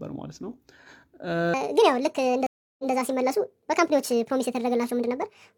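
From 1.54 s to the end, a section at the wrong speed runs 1.58 times fast, likely clocked wrongly, lifting the speech about seven semitones; spectrogram harmonics jump upward and spread apart. At 2.47 s a stream reconnect leaves 324 ms of flat waveform, then resumes 139 ms earlier with a brief fade-in, repeating a short stretch before 2.93 s.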